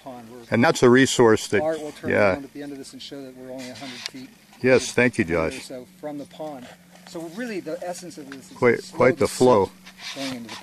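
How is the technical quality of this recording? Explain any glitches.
The recording has three brief dropouts where compressed frames were skipped, at 0.63 s, 2.81 s and 4.25–4.27 s. Each time, the audio jumps ahead by roughly 50, 20 and 50 ms. That points to about two, one and two lost frames of 23.2 ms. Overlapping frames leave a short smeared blip at each join rather than a hard click.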